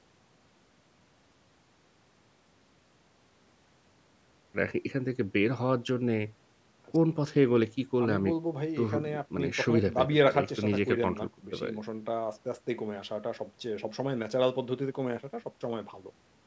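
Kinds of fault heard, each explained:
No faults turn up anywhere in this speech; it has simply been through a call's microphone processing, which is why there's nothing above about 8 kHz and the lowest bass is trimmed, and that's normal for a call.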